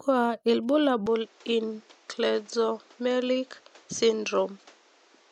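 The likely cause is the input switching to a poorer device at 1.06 s in this speech clip. From there to the end, nothing reaches above 8.2 kHz, so the sound turns duller. A new background noise sits about 30 dB below the speech, with no gap at the switch and little change in level.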